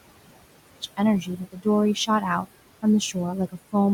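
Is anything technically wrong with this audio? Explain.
Yes. Three technical faults can be heard in this speech.

Noise suppressor artifacts run through the whole clip. A suppressor lowers the frequency bands it judges to be steady noise, frame by frame. Here it takes the background down by about 21 dB. The room noise, about 15 dB below the speech, is pushed down between phrases and returns under the voice.

From 0.0 to 0.8 s the speech drops by about 25 dB and then comes back. For that stretch it sounds faint. The likely cause is one channel inverted: one stereo channel has reversed polarity. When the two channels are summed to mono, everything common to both cancels. The centred voice nearly disappears. Only the small difference between the channels survives, as a weak trace.

Speech cut by the noise suppressor occurs between 1.21 and 1.66 s. The suppressor mistook parts of the speech for noise and pulled them down with the background. 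The deepest drop is about 19 dB. Around a fifth of a second in total is affected. The speech there sounds swallowed or faint.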